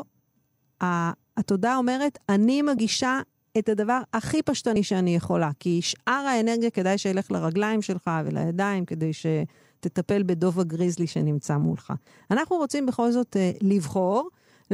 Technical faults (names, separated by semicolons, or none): compressed frames skipped